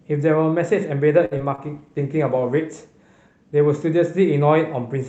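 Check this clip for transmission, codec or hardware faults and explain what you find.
There are three kinds of transmission trouble here, all starting in the first two seconds of the speech.

Short stall from a late packet, 1.25 to 1.33 s: a packet arrived late, the jitter buffer ran dry, and the decoder stretched the last sound for 57 ms, so it drags with a faint buzz or dip.

Short concealed packet loss, at 1.37 to 1.41 s and again at 1.55 to 1.71 s: roughly 40 ms and then 20 ms of audio never arrived. The receiver extrapolated from the previous sound to cover the gaps, leaving brief smears or wobbles.

Call bitrate drop, 1.62 to 4.04 s: the bandwidth estimate fell and Opus went from 40 to 16 kbps, bottoming out for about 1.1 s. The coarser coding makes the speech sound rough and watery, a step down from the 8 kHz Opus path around it.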